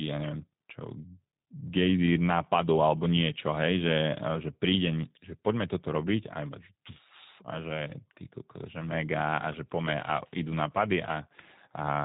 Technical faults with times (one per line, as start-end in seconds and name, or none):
0.00-12.04 G.729 codec